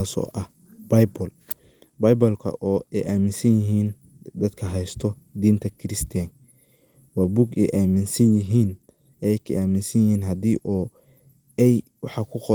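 Speech with no technical faults. The Opus voice compression leaves only a light coding texture, and the sound reaches up to about 20.1 kHz, which fits a fullband hybrid setting at around 24 kbps.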